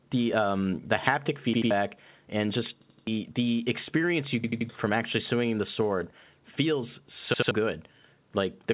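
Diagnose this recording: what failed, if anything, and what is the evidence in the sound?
At the capture stage, the input gain was likely set too high, driving the converter past full scale by about 4 dB between 1.07 and 1.09 s. A small fraction of the samples in that stretch are flattened at the limit, so the peak's top is sheared off and the loudest moment gets a brief harsh, crackly edge. This microphone overload is a gain-staging problem ahead of the converter and is separate from the later playback faults.

At the driver or buffer stage, repeated buffers occur four times because fresh audio missed its deadline and the device replayed the last block. Each repeat is about 85 ms long, which fits a 4096-sample buffer, and the hard join at every replay produces a stutter. The block plays two extra times at 1.54–1.71 s. It plays three extra times at 2.82–3.07 s, just before "the experience you", and again at 4.44–4.69 s, between "the experience you" and "from actually swinging the". 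It plays two extra times at 7.34–7.51 s, after "swinging the sword feels". Roughly a sixth to a third of a second of real audio is lost at each event.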